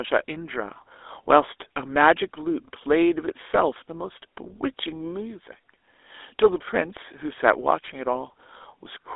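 From start to finish the speech carries GSM full-rate codec damage. The line is confined to roughly 300 Hz to 3.6 kHz, and the pulse-driven vocal-tract model, which fits a 13 kbps stream, leaves a plainly audible buzzy, gravelly roughness.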